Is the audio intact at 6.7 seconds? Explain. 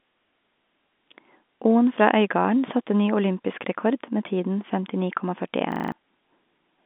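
Yes, the audio is intact at 6.7 seconds, with no fault at that moment beyond the ordinary narrow telephone band of the G.711 line.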